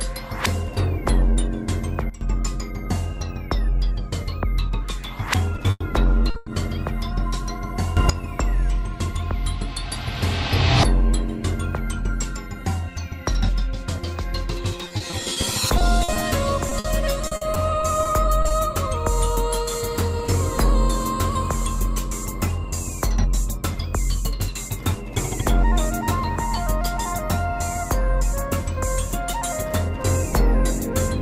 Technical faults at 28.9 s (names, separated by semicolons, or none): none